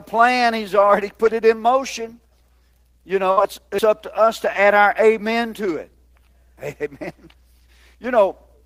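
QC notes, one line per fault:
3.31–3.40 s, burst of packet loss: For roughly 54 ms the speech does not advance. The last sound is carried on and fades in level, and then the speech resumes with about 60 ms of material skipped. This is how a receiver covers for several consecutive packets that were lost or arrived too late to play. It extends and attenuates what it last decoded until fresh audio arrives, so content is missing.
3.79 s, audio missing between chunks: At this point the speech jumps abruptly, with roughly a tenth of a second of audio gone and the two sides butted together with no silence between them. The cause is likely a chunked recording or processing stage dropping a short span as it closes one block and opens the next. The position fits a 4 s chunk length. Because nothing fills the gap, the cut reads as a skip.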